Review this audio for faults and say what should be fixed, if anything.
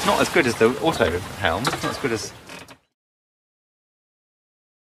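Nothing here needs fixing, and the level eases down in an even, deliberate fade-out that begins around 1.5 s and finishes at 2.95 s with no step or click along the way.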